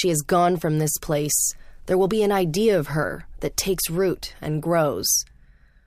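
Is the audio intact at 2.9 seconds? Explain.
Yes, the speech at 2.9 seconds is intact, with no dropout, glitch or other fault at that moment.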